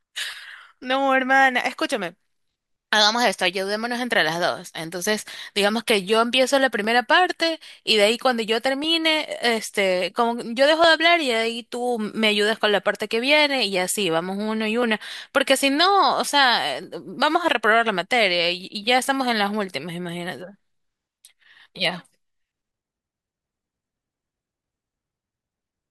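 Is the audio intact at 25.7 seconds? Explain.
Yes, the speech plays through cleanly at 25.7 seconds, with no dropout, click, distortion or other fault at that moment.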